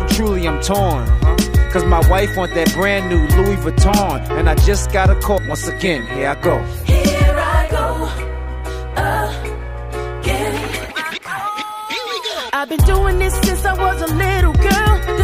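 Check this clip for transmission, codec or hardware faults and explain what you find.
One transmission fault is audible: a stream segment skipped at 5.37 to 5.39 s. The sound jumps abruptly forward there, as if a stretch has been cut out, and the join carries a brief blip. The likely cause is a segmented stream where one chunk failed to arrive or load, so the player moved straight on to the next segment. The missing portion of the programme is never played, which produces the sudden discontinuity and the small click at the splice.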